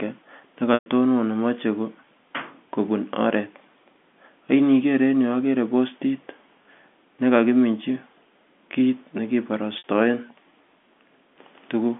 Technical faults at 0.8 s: packet loss with pitch repetition

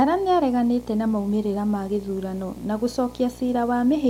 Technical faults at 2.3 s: video or display buzz

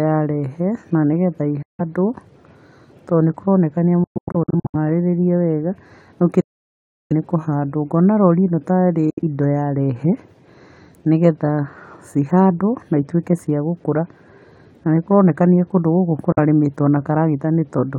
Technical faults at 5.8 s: none

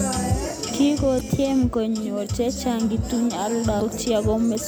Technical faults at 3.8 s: damaged data in a compressed stream

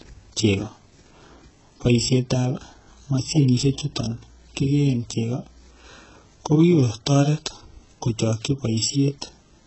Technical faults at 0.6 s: HE-AAC compression

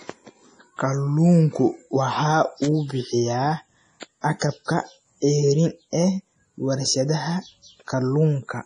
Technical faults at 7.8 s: MP3 compression

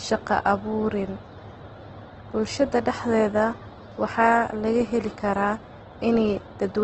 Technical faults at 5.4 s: Opus compression

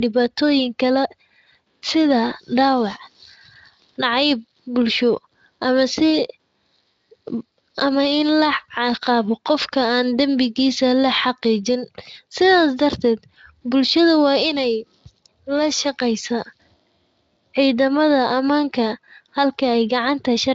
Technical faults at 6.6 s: none

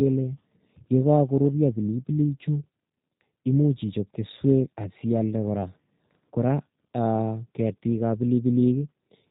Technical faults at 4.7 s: G.729 codec

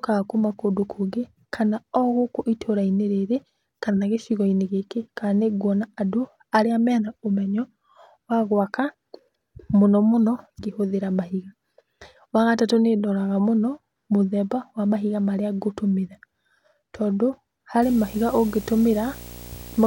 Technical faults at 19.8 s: video or display buzz

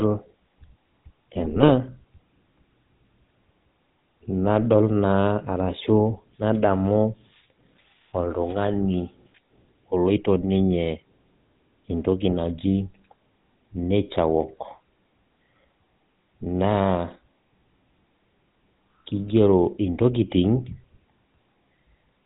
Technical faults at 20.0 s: GSM full-rate codec

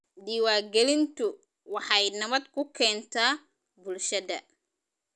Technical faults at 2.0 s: resampler restarted on every block

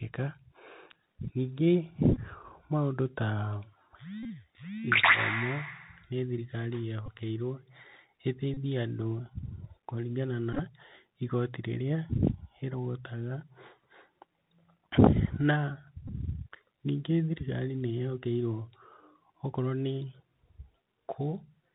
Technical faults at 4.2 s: Bluetooth CVSD headset codec; Bluetooth headset packet repeated

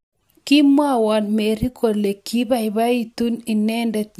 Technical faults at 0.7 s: none

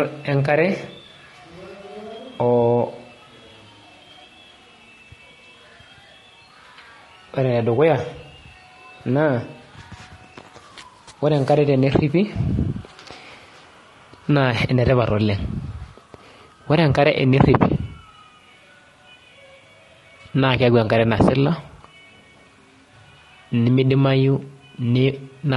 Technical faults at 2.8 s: low-delay AAC compression

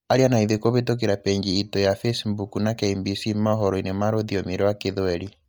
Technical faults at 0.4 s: Bluetooth LC3 compression

